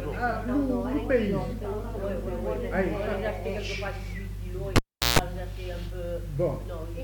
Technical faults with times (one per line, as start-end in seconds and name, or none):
4.76-5.19 cable pulled and plugged in